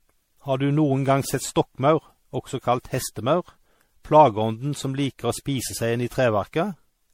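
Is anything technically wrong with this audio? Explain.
Yes. Generation loss, throughout: the speech sounds swirly, hollow and smeared with blurred attacks and nothing above 16.5 kHz, likely from roughly ten MP3 re-encodes near 64 kbit/s.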